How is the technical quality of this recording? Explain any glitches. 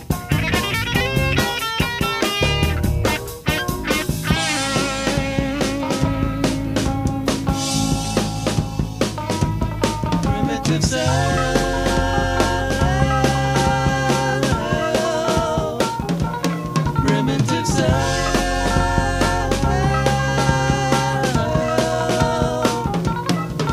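No glitches or technical faults can be heard anywhere here.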